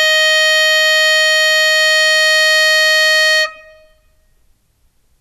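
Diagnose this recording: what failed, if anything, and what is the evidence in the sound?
Nothing stood out on listening to this music recording that would point to a failure at any stage of the chain.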